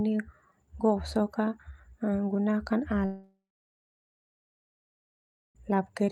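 At 3.05 s the speech turns into a fading buzz, gone within about a third of a second, then silence until sound returns at 5.57 s. This is likely a long network dropout: 2.5 s never arrived, and the receiver briefly stretched the last sound.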